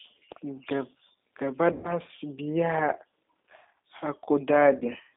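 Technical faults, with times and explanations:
Throughout: G.729 codec at 8 kbit/s, band-limited to about 250 Hz to 3.7 kHz, with the speech rebuilt from a few pulses, so it sounds thin, rough and a bit synthetic.
1.72 to 1.99 s and 4.79 to 4.84 s: VoIP packet loss concealed by the speech codec. The decoder stretches the last sound into a fading buzzy tone or coloured noise, over about 120 ms and then 20 ms.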